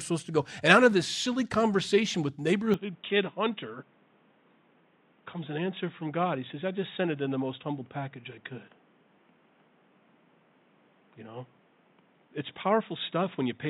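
At 2.74 s the speech abruptly turns dull and boxy and stays that way to the end, with no gap at the transition. Nothing above 3.8 kHz survives, the level drops by about 5 dB, and a new noise floor appears, roughly 35 dB below the speech. This is likely an input switched to a poorer device in mid-recording, such as another microphone or a headset call profile with its own narrower band, tone and noise.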